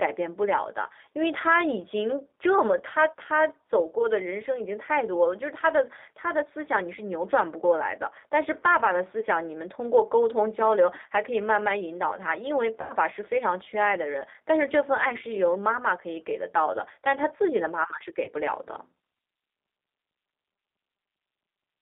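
The whole recording carries G.729 codec damage: speech is squeezed into roughly 250 Hz to 3.7 kHz at 8 kbit/s, leaving it plainly rough and synthetic. VoIP packet loss concealed by the speech codec appears at 9.20 to 9.26 s, 12.81 to 12.93 s and 18.25 to 18.30 s. Each time, the decoder stretches its last sound into a fading buzzy tone or coloured noise. The middle dropout, consistent with about 90 ms lost, is the longest.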